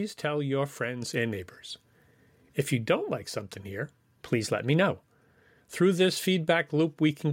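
At 1.02 s, between "tell your" and "and neighbors", the microphone volume is stepped up: the input level jumps by about 4 dB in a single move, as if the call software decided the microphone was too quiet and raised the device gain. The voice and the room background rise together and stay louder. That shared, instant step separates it from someone leaning toward the microphone, which changes the voice's tone and closeness but barely lifts the background.

From 4.23 s to 4.91 s, just after "don't like something here", the audio runs about 5.6% fast and sits roughly 95 cents sharp, almost a full semitone, before snapping back to normal speed and pitch. Speed and pitch move together, which points to a resampling change rather than pitch correction or a speaking-style change. The likely cause is a drift correction step, where clock-matching software briefly sped up playback to balance its buffer.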